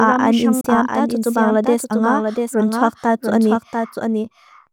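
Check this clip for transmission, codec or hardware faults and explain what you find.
Two faults are present: a delayed second copy runs through the whole clip, and a brief hole opens early on.

Throughout the speech a doubled audio track is audible: a full-band copy trails the original by roughly 0.7 s, about 5 dB quieter, with no reverberant tail. This likely comes from a second, slower capture path or misaligned edit. On a spectrogram every syllable reappears as a fainter, identical ghost shifted right.

From 0.61 to 0.67 s the sound cuts out abruptly and then resumes as though it had kept playing, with about 30 ms of audio missing. This is likely a Bluetooth dropout, consistent with roughly two packets failing to arrive. The waveform shows a flat gap, and the spectrogram shows a vertical blank band.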